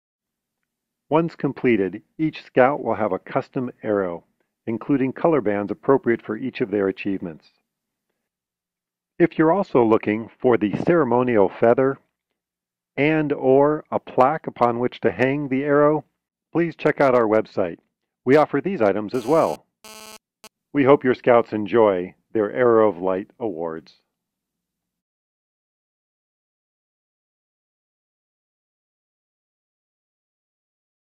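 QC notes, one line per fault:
19.14–20.47 s, GSM phone buzz: a harsh, raspy buzz at 217 Hz with dense harmonics, about 22 dB below the signal, from a nearby phone's data bursts being rectified by the audio circuit.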